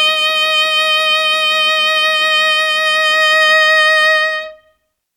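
No technical faults can be heard anywhere in this music recording; the signal stays continuous and stable throughout.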